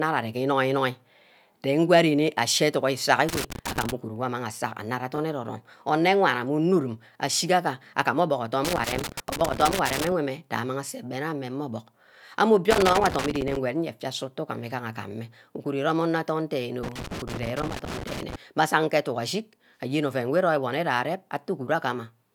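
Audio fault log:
3.29–3.92, 8.65–10.12, 12.71–13.56 and 16.83–18.36 s: loose connector crackle. A worn contact makes and breaks at random, giving irregular scratchy bursts rather than evenly spaced digital clicks.
5.14–5.18 s: chunks out of order. One 20 ms chunk plays a chunk late, so nothing is missing but the speech briefly jumbles.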